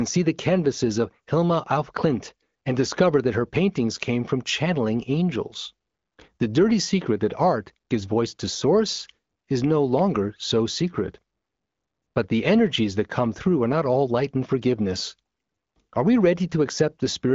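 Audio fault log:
Nothing stood out on listening to this speech, heard through an AMR wideband (HD Voice) path whose sound stops at about 7.4 kHz.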